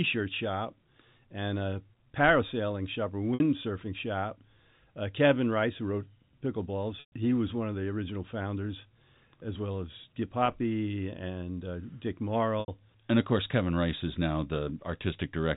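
Speech carried over a G.711 telephone path, with nothing above 4 kHz. Packet loss with pitch repetition interrupts it four times: 3.34 to 3.40 s after "a parasailing shop or", 7.00 to 7.12 s before "he was one of", 10.46 to 10.48 s after "founders as well as", and 12.60 to 12.68 s. The gaps last 60, 120, 20 and 80 ms, which fits 20 ms packets. The receiver fills each gap by repeating the last pitch period. The short gaps sound like a held, buzzy tone. The 120 ms gap fades toward silence before the speech returns.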